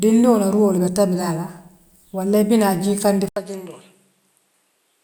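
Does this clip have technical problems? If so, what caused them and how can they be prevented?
Yes. At 3.29 s speech drops out for 80 ms, then resumes about 10 dB quieter, with nothing above 13 kHz and a new, faint noise floor. That bundle of gap, level, tone and noise changing together, not a filter alone, likely means the input switched to a poorer device. Locking the recording input to one microphone and turning off automatic device switching prevents it.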